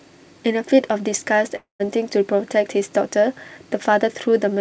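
A long network dropout runs from 1.56 to 1.82 s in this speech. For about 240 ms the incoming sound breaks off, most likely because packets stopped arriving and the receiver had nothing to play. It papers over the hole by stretching the last sound into a buzzy tail that fades over roughly 0.24 s, then leaves about 130 ms of near-silence before the speech resumes. The lost stretch never returns. Like the rest of the clip, it stays band-limited to 8 kHz by the G.722 call codec.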